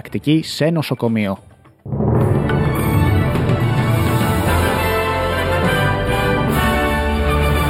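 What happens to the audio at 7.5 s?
At 7.5 s, as throughout, there is channel delay (comb filtering). One channel lags by a few samples, so mono summing cuts evenly spaced notches from around 7 kHz, sounding hollow rather than low-passed.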